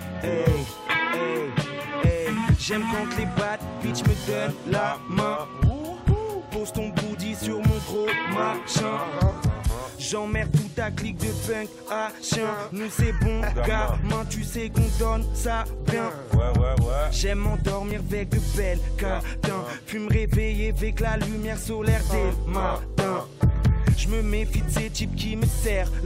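Overlap between stream segments causes a tiny skip at 3.91 to 3.93 s and again at 17.91 s. Two 2 s segments claim the same stretch of time, so the player trims about 20 ms, then 17 ms, of sound that was never duplicated, and the waveform jumps across the gap.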